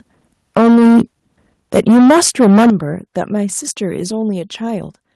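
From 0.56 to 1.02 s the speech is driven about 9 dB past the converter's limit. The tops of many peaks are cut flat, giving a harsh crackle. This is likely microphone overload, with the input set too high for the converter. At 0.57 s the level drops by about 3 dB in one step. This is likely the microphone volume stepped down by the call software reacting to the clipping. Overload returns from 1.74 to 2.7 s, about 12 dB over, with crackle on the loudest parts. At 2.70 s a much larger step down of about 11 dB follows, and the speech and background suddenly drop in level.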